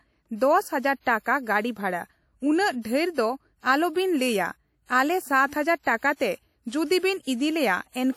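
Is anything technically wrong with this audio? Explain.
Yes. Throughout the speech, WMA compression is likely: coarse long-block quantisation leaves ringing, washy smearing with signal-following hiss, which fits roughly 48 kbps. The band stays intact to 19.6 kHz, so this isn't band-limiting.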